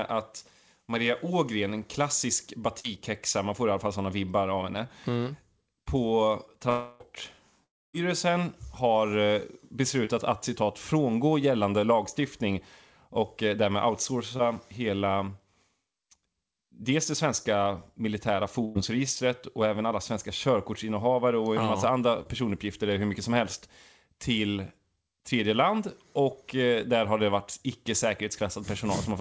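Speech over a call line, band-limited to nothing above 8 kHz, which fits a G.722 wideband call. There's short concealed packet loss at 2.80–2.86, 10.05–10.09, 14.37–14.41 and 22.23–22.27 s. Each time, 20 to 40 ms of audio failed to arrive and the decoder patched the hole by extending the previous sound, leaving a quick smear or wobble. Around 6.70–7.02 s and again at 7.64–7.95 s you get what's likely a long network dropout. About 300 ms goes missing each time. In the first, the extended sound covers the whole gap. In the second, it fades fast into roughly a quarter-second of near silence before the audio picks up further along. At 18.65–18.77 s a burst of packet loss takes out about 100 ms, and the receiver holds and fades the last sound across the gap as a buzz or hiss before jumping ahead.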